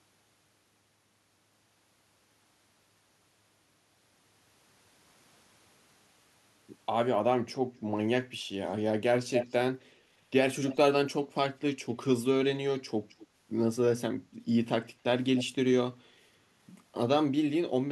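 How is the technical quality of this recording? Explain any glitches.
The recording has one recurring fault: echo leak, at 9.35–9.54, 9.80–9.85, 10.69–10.77, 13.09–13.27 and 15.36–15.44 s. A copy of the speech returns 251 to 261 ms late, likely from a loudspeaker-side echo canceller letting pickup through. It is faint at 9.80 s and nearly as loud as the direct speech at 9.35 s.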